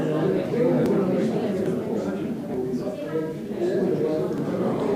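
A recording of sounds with four abrupt skips, at 0.86, 1.66, 2.54 and 4.38 s. Each is a sudden jump forward, with no gap of silence. Roughly 20 to 70 ms goes missing each time. The likely cause is a dropped buffer (overrun).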